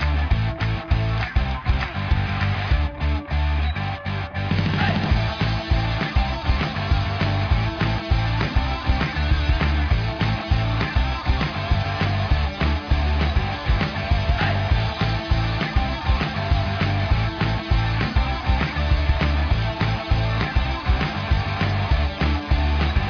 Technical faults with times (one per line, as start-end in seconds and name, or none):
none